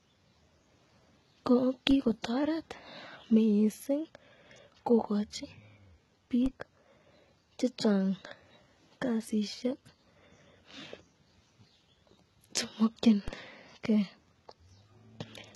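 HE-AAC compression runs from the start to the end: the treble sounds rebuilt rather than captured, with s sounds turning gritty and lispy and the top end metallic. This points to heavy, very low-bitrate coding, around 16 kbps, likely HE-AAC, where copied-up bands replace the true high harmonics.

A DC step occurs at 1.91 s, 6.46 s and 13.28 s. Each time the waveform's zero line jumps abruptly, then drains away as a 20 Hz high-pass pulls it back, producing a short low thump while the speech carries on unaffected.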